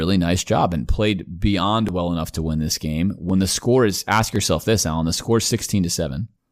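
Small forward jumps in the speech at 1.89 s, between "job and played beyond" and "well enough to win", and at 3.30 s and 4.36 s, on either side of "the score is ask". Each is likely a dropped buffer (overrun), where a few milliseconds of samples were overwritten and the two sides spliced together with no gap.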